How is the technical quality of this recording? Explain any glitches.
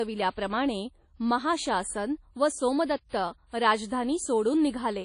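The technical quality is compromised: the speech sounds ringing and washy throughout, with a hiss that swells and fades with the voice, and nothing above about 10.1 kHz. That points to WMA compression as the likely cause. The codec transforms the audio in long blocks, spreading quantisation noise across tens of milliseconds and discarding weak detail. The damage is plainly audible, and the missing top end fits a low bitrate of around 32 kbps.

From 3.09 to 3.13 s there is pre-echo: a short smear of hiss lasting about 42 ms arrives just before a sharp attack, which then sounds soft rather than crisp. The transform codec sizes its quantisation noise for the loudest part of a block and spreads it evenly across that block. Because the attack falls late in the block, the noise meant for it also fills the quiet moment beforehand.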